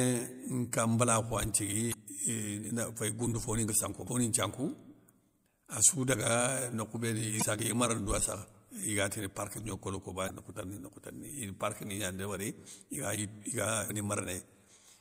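Damaged data in a compressed stream breaks into the speech five times, at 1.90–1.94, 4.04–4.08, 7.38–7.43, 10.26–10.30 and 13.86–13.90 s. Each time the decoder misreads corrupted bytes, loses frame sync and must find the next header, leaving a brief chirp or blip of about 45 ms.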